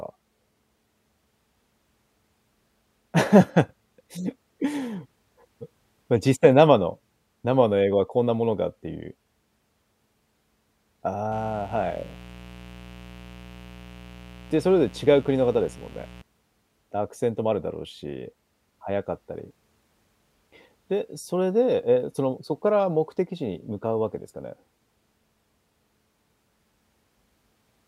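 From 11.32 s to 16.22 s a mains buzz runs under the speech, a steady, raspy rasp sitting roughly 20 dB below it. Sharp switching spikes from poorly shielded or rectified power wiring have leaked in at twice each 60 Hz cycle, so the interference carries a dense stack of 60 Hz harmonics reaching into several kHz. A spectrogram shows evenly spaced horizontal lines across that span, and a zoomed waveform shows small repeating spikes riding the signal.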